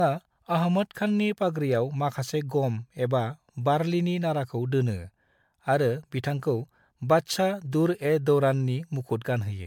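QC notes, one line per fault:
throughout, generation loss: speech sounds swirly, smeared and hollow, with blurred consonant attacks, far beyond a single MP3 pass near 128 kbit/s. Likely around seven decode-encode cycles, each requantising on a shifted frame grid so noise and spectral holes accumulate.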